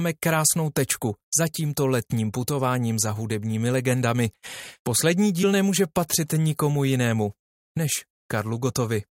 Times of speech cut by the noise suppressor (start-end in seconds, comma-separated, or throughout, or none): none